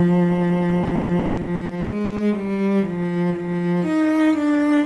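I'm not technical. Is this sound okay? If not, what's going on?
No. From 0.83 to 2.21 s there's repeated packet loss, which gives a robotic sound. Pieces of audio keep going missing, about half of that stretch, and each hole is patched by stretching the last sound. Unlike a single dropout, the holes come over and over.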